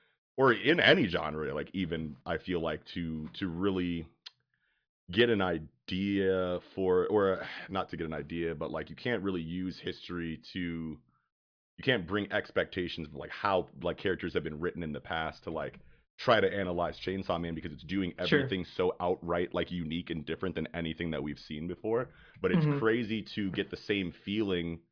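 No technical faults can be heard anywhere in this recording.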